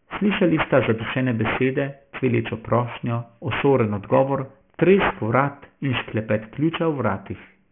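From start to end the speech carries aliasing: content above about 3 kHz folds back below that edge, which fits a drop to a 6 kHz rate without filtering. Sibilants turn gritty and metallic. A spectrogram shows energy running hard up to 3 kHz, with mirrored, fairly strong stray components.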